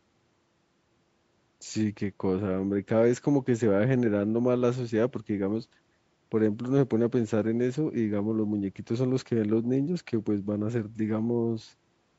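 No technical faults can be heard anywhere in the speech. It has the sound of call microphone processing, with the lowest bass trimmed and nothing above 8 kHz.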